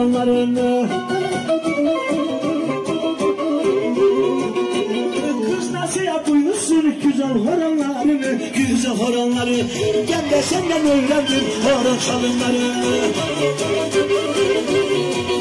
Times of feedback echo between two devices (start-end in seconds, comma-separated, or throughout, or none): none